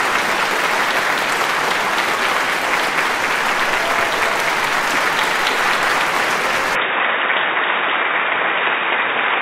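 Input switched to a poorer device at 6.75 s, lasting to the end. The sound abruptly turns dull and boxy, with nothing above 3.8 kHz and a new noise floor about 35 dB down, at unchanged level and without a gap. A narrower-band microphone likely took over.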